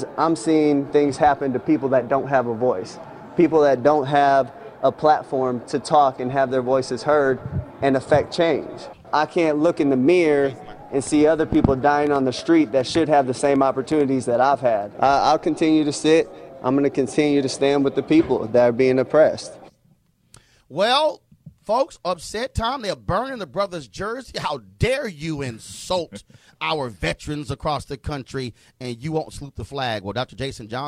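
From 11.07 to 14.0 s, about ten unevenly spaced pops, about as loud as the audio, tick at 3.75 per second: a train of clicks, likely electrical interference.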